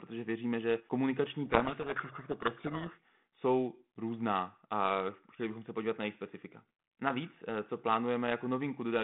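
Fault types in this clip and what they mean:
Codec payload misread, 1.46 to 2.98 s: just after "věříme že komunikační" the speech is buried in harsh distortion for about 1.5 s. The receiver is unpacking the G.726 code words with their bits in the wrong order, so the difference values it decodes are wrong and the adaptive prediction is steered away from the real signal. This happens on a 32 kbit/s G.726 telephone path whose band runs from about 150 Hz to 3.5 kHz.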